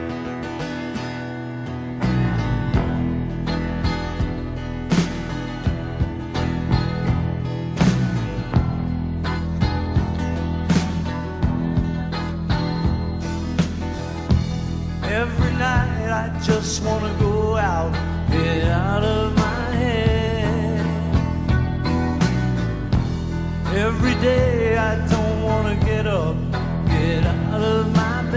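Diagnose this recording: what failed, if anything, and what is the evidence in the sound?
Nothing in the chain seems to have let go here; there's no click, dropout, glitch or distortion to point at anywhere in the recording.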